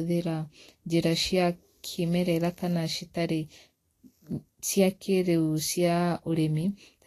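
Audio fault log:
Throughout, Vorbis compression, likely: the speech carries a grainy, hissy sheen, sibilants turn rough and noisy, and consonant onsets sound smeared, with nothing above 14.2 kHz. Fine treble detail has been quantised so coarsely that it returns as noise of similar energy, which fits a low bitrate near 35 kbps. Unlike a plain low-pass filter, the remaining highs are rough and noisy rather than merely dull, and the damage follows the speech rather than forming a steady background hiss.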